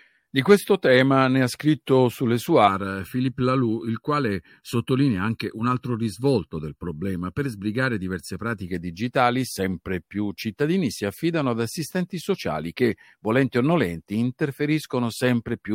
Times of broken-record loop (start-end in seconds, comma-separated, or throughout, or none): none